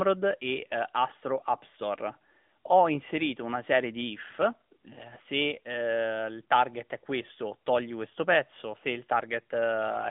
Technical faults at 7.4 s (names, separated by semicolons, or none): AMR narrowband mobile codec